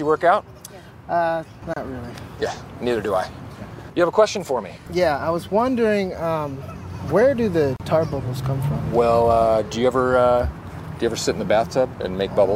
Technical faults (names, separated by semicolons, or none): gap at a join of encoded pieces